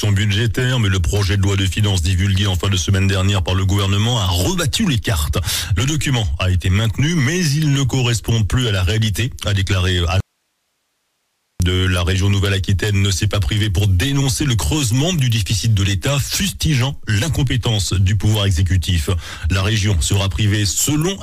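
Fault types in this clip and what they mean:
Audio dropout to a faint residue: the sound cuts abruptly for about 1.4 s, leaving only faint hiss far below the level, likely a lost signal on a live path.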